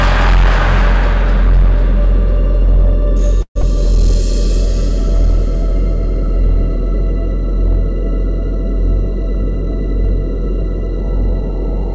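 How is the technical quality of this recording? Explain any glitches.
The recording has clear technical faults: clipping throughout, a gap near 3.4 s, and tempo shifts from the receiver's jitter buffer, heard through a band that stops at 8 kHz.

Hard clipping, throughout: the signal was driven about 9 dB past what a stage could pass, so roughly one sample in twenty has its peak flattened, adding harsh fuzz on loud moments.

Long network dropout, 3.42 to 3.64 s: audio likely stopped arriving, so the receiver stretched the last sound into a fading buzz for about 206 ms, followed by 80 ms of silence, and about 100 ms of material is lost.

Jitter buffer slow-down, 3.77 to 6.82 s: after the gap, the buffer needed roughly 50 ms more delay, so it repeated small pieces totalling 90 ms. The audio plays at 97% speed, drawn out at unchanged pitch.

Jitter buffer speed-up, 8.98 to 11.94 s: the buffer held too much audio and cut short pieces totalling about 70 ms. 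The sound runs at 103% speed, at the same pitch.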